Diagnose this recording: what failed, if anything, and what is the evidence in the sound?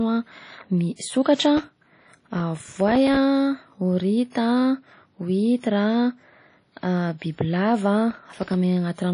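Codec stage. The whole clip carries plainly audible codec damage, and there is no content above about 10.1 kHz. The band limit and the smeared, noisy texture around the speech point to a transform codec at a low bitrate, likely WMA compression at around 32 kbps. With long transform blocks, quantisation noise spreads across tens of milliseconds around each sound. At this rate, weaker spectral lines are dropped and the top of the band is cut.

Driver or buffer stage. Processor overload crackle appears in two bursts, from 1.57 to 3.16 s and from 8.11 to 8.54 s. In each, the speech is broken by a rapid train of tiny hard-edged dropouts, heard as gritty tearing riding on the sound. The processor repeatedly failed to fill very short buffers, roughly a millisecond and a half each, before their deadlines. Each missed buffer went out as silence, dozens in the first burst and a few dozen in the second.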